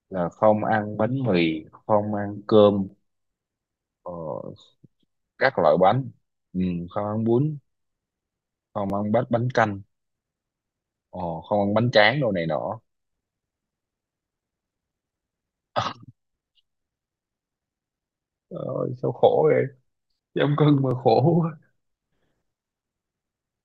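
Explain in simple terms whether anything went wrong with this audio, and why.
Something went wrong in how the audio was handled: it was processed in pieces about 6 seconds long, and each new piece began slightly before the previous one had finished. This is called overlapping chunks. At each join, a tiny slice of about 6.5 milliseconds plays twice, which you hear as a brief click or stutter in the speech. These occur at 2.89, 8.90 and 20.91 seconds.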